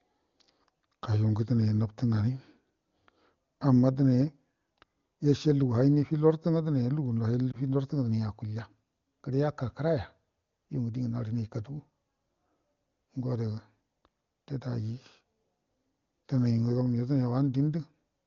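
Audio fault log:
7.52–7.57 s, lost AMR speech frame: a brief dip or warble in the speech, lasting roughly the length of a single 20 ms frame. The decoder had no valid data for that frame, so it repeated the previous pitch and vocal tract settings at reduced gain. The sound smears and softens rather than cutting out, then the voice comes back weak or rough for a moment. The surrounding AMR wideband (HD Voice) coding sounds clean, consistent with a high AMR-WB rate.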